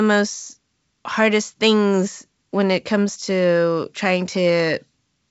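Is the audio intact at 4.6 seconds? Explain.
Yes, at 4.6 seconds the speech is intact, with no fault at that moment.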